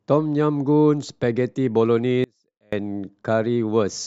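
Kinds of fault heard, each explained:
Audio dropout to a faint residue: the speech abruptly cuts out for about half a second, leaving only a faint leak far below normal level, likely a momentary signal loss.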